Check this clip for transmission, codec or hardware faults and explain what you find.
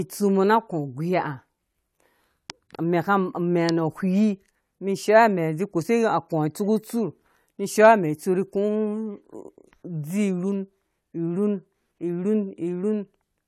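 Nothing in this speech recording points to a fault.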